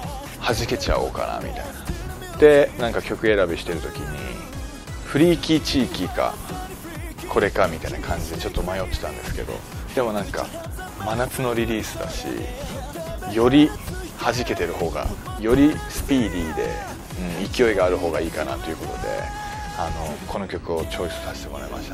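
Around 2.37 to 2.40 s, 5.04 to 5.08 s and 8.50 to 8.58 s you get a corrupt frame decoded: flipped bits in a few compressed frames get played anyway, dumping energy at wrong frequencies. Each is a short glitch, the middle one quieter, near -30 dBFS against roughly -20.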